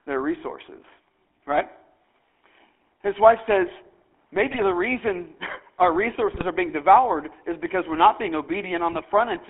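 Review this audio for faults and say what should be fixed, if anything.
The whole recording carries GSM full-rate codec damage. The sound is confined to roughly 300 Hz to 3.4 kHz, and the speech has a plainly audible buzzy, gravelly texture, which fits a 13 kbps full-rate coder. That coder fits a vocal-tract filter to each frame and excites it with a sparse, regularly spaced pulse train, discarding most of the fine excitation detail. The roughness comes from that coarse excitation. To prevent it, capture or route the audio over a wideband or modern codec path instead of legacy GSM full rate.

GSM bit errors cause four brief bursts of squawking and gargling at 1.51–1.61 s (just after "their resources"), 4.49–4.65 s, 6.32–6.46 s (just before "are being devoured is") and 8.92–9.03 s (just after "because we're not being"). Each burst spans roughly five to seven codec frames, with a bit error rate of around 1.5 %. 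Corrupted filter, pitch or gain parameters reach the decoder, so those frames come out spectrally bent or with sudden level jumps. To prevent it, record over a stronger link or one with effective error concealment.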